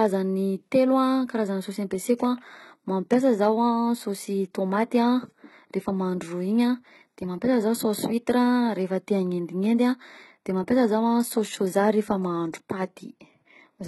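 Throughout, likely heavy HE-AAC compression rebuilds the treble from copied lower bands, fitting a very low bitrate. Nothing passes above 11.8 kHz, and s sounds turn gritty and metallic.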